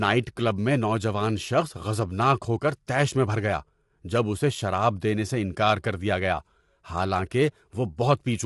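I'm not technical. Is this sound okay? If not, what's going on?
No, it isn't. Throughout, the speech sounds rough and grainy, as if a fizz sits between the parts of each voiced sound. The top is missing too. Nothing comes through above about 11.6 kHz, so the brightest detail is gone. This is likely low-delay AAC compression, the kind used in video calls. It squeezes sound into very short slices. That saves time but loses fine detail, and here the damage is plainly audible.

At 2.87 s there is a pre-echo. A short hiss, lasting about 12 ms, comes just before a sharp sound starts. The compression handles sound in small blocks and spreads its noise evenly across each one. Here the sudden sound falls late in its block, so the noise meant for the loud part also leaks into the quiet moment before it. The start of that sound is softened and smeared.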